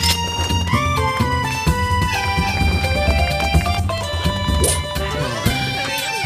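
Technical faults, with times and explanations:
2.02–3.80 s, doubled audio track: a single copy about 5 dB quieter trails roughly 300 ms behind and stops abruptly, with no decaying repeats as echo would have. It is likely a slower second capture path.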